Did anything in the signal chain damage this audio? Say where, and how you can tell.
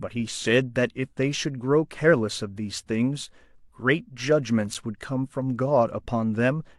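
Yes. A gap between stream segments at playback: a hard-edged silence of about 6.5 ms at 4.74 s. Unlike a dropout, no sound is lost, only delayed, which fits 6-second segment boundaries.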